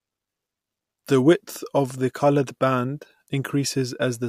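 No technical faults can be heard anywhere in this speech recording. There is no moment that needs a timestamp or a note on what went wrong.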